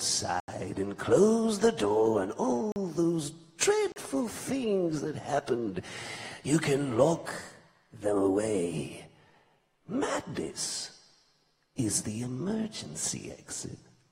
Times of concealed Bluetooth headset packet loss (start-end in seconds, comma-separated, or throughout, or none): none